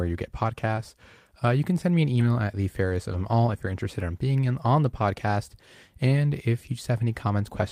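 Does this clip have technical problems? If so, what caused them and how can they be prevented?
Yes. Around 0.75 to 0.79 s, there's a short concealed packet loss: about 20 ms never arrived, so the decoder stretched the preceding sound to cover the gap and then faded back in. It comes across as a tiny smear. Steadier network delivery or a larger jitter buffer would keep this from happening.

There are also three spots where a lost packet was rebuilt from error correction. The first is at 0.77 to 0.79 s, right after "you get". The second runs from 2.15 to 2.25 s, between "can send me an" and "at the fairest of", and covers three separate lost packets. The third is at 3.13 to 3.15 s, between "at the fairest of" and "all if you're interested". In each case the decoder played the low-bitrate backup copy carried in the next packet, so there's no gap, just briefly rougher, noisier sound. Cutting packet loss on the link is the real fix.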